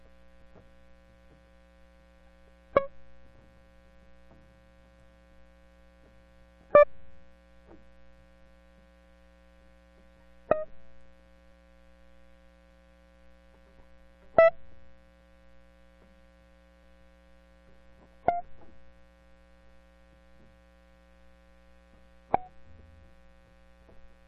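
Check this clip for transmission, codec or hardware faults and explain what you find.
One fault: at 6.82–6.84 s, compressed frames skipped. About ten 23.2 ms frames drop, so the music jumps roughly 0.2 s ahead, visible as a spectrogram discontinuity.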